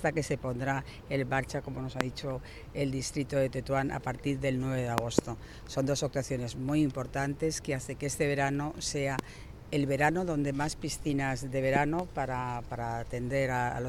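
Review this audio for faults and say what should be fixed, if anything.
Loud pops occur at 2.01–2.03 s, 9.19–9.21 s, and as pairs at 4.98–5.21 s and 11.76–12.02 s, peaking about 20–25 dB above the sound. A voltage spike from a switch, plug or static is the likely cause. Secure connections and ground equipment properly.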